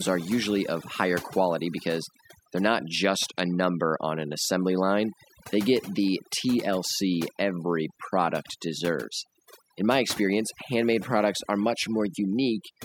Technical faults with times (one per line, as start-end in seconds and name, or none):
0.00-12.85 overdone noise removal